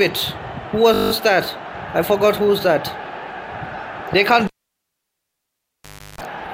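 At 0.94 to 1.12 s, a system hang loop: the machine stalled while the hardware replayed one 20 ms buffer nine times, producing a steady 50 Hz buzz. From 4.47 to 6.21 s, a cable pulled and plugged in: a pop, about 1.69 s of near silence, a 0.34 s burst of 50 Hz mains buzz, then another pop.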